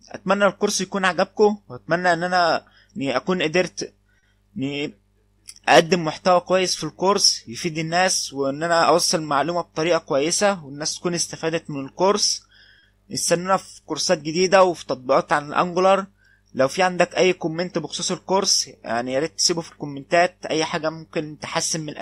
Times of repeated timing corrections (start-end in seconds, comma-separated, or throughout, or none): 0.04-3.37, 5.59-21.78